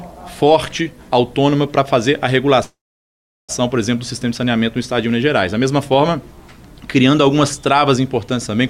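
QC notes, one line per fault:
2.63–3.51 s call audio freeze: brief fading buzz, then 0.73 s silence; sound resumes where it stopped with nothing skipped, likely delayed packets emptying the jitter buffer.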